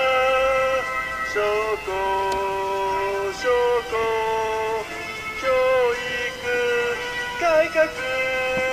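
Nothing goes wrong anywhere in this one, with no technical faults turning up at any point in the audio.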